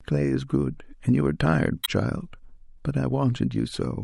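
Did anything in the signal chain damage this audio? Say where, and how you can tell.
Yes. The damage sits at the codec stage, from 1.82 to 1.89 s. There the speech breaks into a short, harsh blip lasting about 70 ms. That sound points to damaged data in a compressed stream. Some bytes in the encoded file were lost or corrupted. The decoder could not read those frames, lost sync, and jumped to the next valid frame header. The blip comes from that resync.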